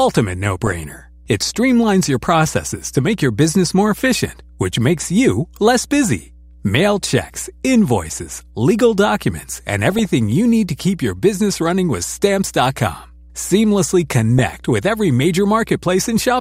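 From start to end, a ground loop or nearby transformer is coupling the power line into the signal, giving mains hum: a steady 60 Hz tone with low harmonics, sitting about 25 dB below the speech.

Weak DAB reception lets bit errors slip past error correction into the MP2 data. Corrupted samples put short blips of noise in single sub-bands, and corrupted scale factors make sub-bands jump in level for up to a frame, heard as DAB burbling. It occurs at 0.62–0.72 s, at 3.95–4.06 s between "make your business more" and "which makes you less", at 9.91–10.09 s between "invoices legal documents and" and "you need to keep", and at 14.39 s just before "with every".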